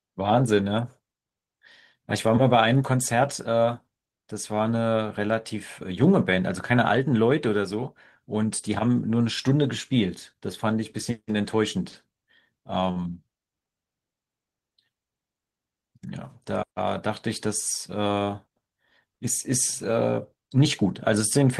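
A short stall from a late packet occurs at 12.91 to 12.98 s. The packet arrived late, the jitter buffer emptied, and the receiver held the last speech sound for about 44 ms before resuming where it left off, so nothing is lost but the sound drags briefly.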